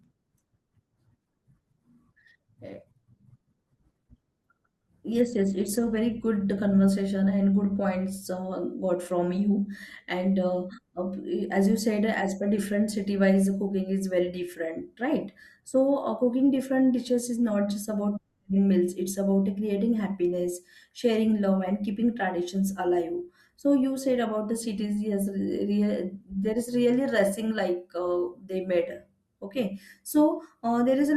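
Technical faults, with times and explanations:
0.0 to 6.0 s, adaptive stream starting at a low bitrate: the speech opens dull and smeared, with thin, synthetic-sounding treble, consistent with a 16 kbit/s Opus rendition chosen to start quickly. At 6.0 s it brightens abruptly without a gap, which fits a step up to about 64 kbit/s.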